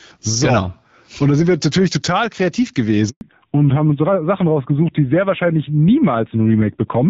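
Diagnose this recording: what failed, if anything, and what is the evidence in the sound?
Handover gap at the network stage: the speech drops to complete silence from 3.09 to 3.21 s, a 120 ms hole, with the voice dying away within a few tens of milliseconds.

Fallback to narrowband at the codec stage: the clear HD Voice heard earlier gives way, from 3.21 s on, to duller, rougher speech with nothing above 4 kHz. This is a lasting switch, not a brief filter.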